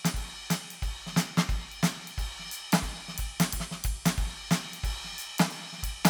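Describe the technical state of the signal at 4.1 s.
At 4.1 s the music plays through intact, with no dropout, distortion, glitch or other fault in the signal at that point.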